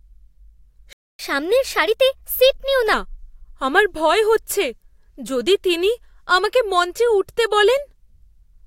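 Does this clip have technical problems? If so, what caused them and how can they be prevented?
Yes. The speech cuts out abruptly at 0.93 s and stays silent until 1.19 s, about a quarter of a second. This playback stall was likely caused by the player running short of buffered data or its audio thread being blocked. A larger playback buffer and a higher-priority audio thread would prevent it.

From 1.19 s to 2.93 s the speech runs 1.15 times faster and sounds pitched up by roughly two semitones. This catch-up at higher speed is the player resampling its backlog to recover the time lost in the stall. A pitch-preserving time-stretch, or simply resuming without catch-up, would avoid it.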